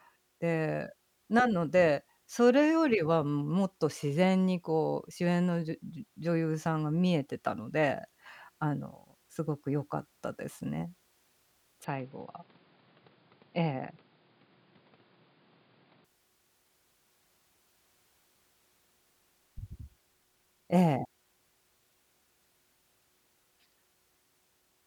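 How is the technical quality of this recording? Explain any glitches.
The recording has one glitch. From 11.84 to 16.05 s there is an input switched to a poorer device, likely another microphone or a headset's call profile. Nothing above 5 kHz passes, so the speech turns dull. The level drops about 5 dB. A new noise floor appears, around 30 dB below the speech. Neither switch has a gap.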